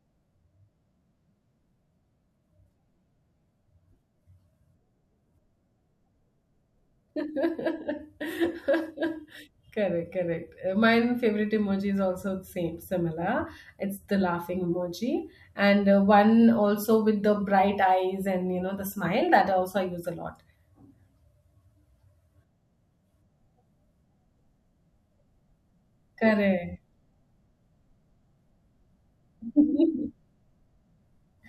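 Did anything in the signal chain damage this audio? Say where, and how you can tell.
No, nothing along the way seems to have harmed this speech recording, and there's no stage I'd point to as having left a mark on it.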